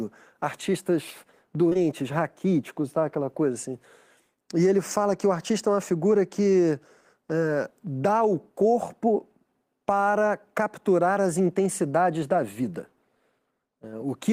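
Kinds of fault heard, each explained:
Short concealed packet loss: two back-to-back 20 ms chunks of speech missed the decoder, from 1.69 to 1.77 s, and the receiver bridged each by extending the preceding sound, leaving a short smeared wobble just before "raquíticos tá aquela coisa".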